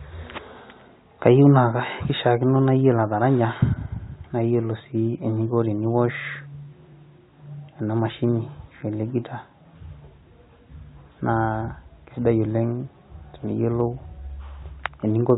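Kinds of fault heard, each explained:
No faults can be heard in this speech. It comes over a G.711 telephone path that works as it should, with nothing above 4 kHz and at most a faint quantisation noise that rises and falls with the level.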